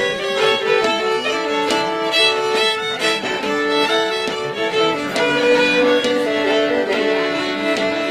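No technical fault can be heard anywhere in this audio. There is nothing in the recording that calls for a time or a cause.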